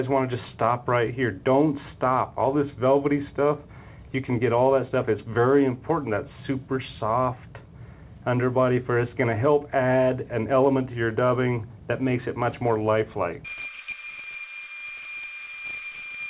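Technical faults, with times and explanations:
No technical faults are present: the audio carries the band-limited, telephone-style character of a call path, with nothing above 4 kHz, which fits narrowband G.711 A-law coding at 64 kbps.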